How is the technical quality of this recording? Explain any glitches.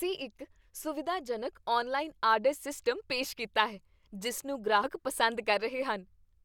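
The recording has one glitch, a case of compressed frames skipped. At 4.83 to 4.86 s, just after "ਕੀਤਾ ਹੈ ਜਿਸ ਨੂੰ", the speech jumps forward by roughly 70 ms. A few whole frames never reached playback, which fits 20 ms frames. The speech skips ahead at the join.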